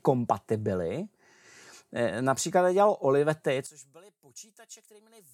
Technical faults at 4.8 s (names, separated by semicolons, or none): one channel inverted